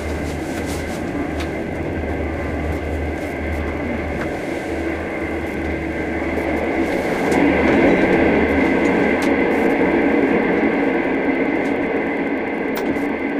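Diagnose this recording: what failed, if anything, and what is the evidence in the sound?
Wi-Fi interference in the analogue wiring runs through the whole recording as a faint, steady ticking just under ten times a second, well below the sound itself at roughly 40 dB down. A nearby Wi-Fi radio's beacon bursts, repeating every 102.4 ms, are being rectified by the analogue circuit and demodulated into audible clicks. On a spectrogram this appears as thin, evenly spaced vertical broadband lines; on a zoomed waveform, as a regular comb of tiny spikes.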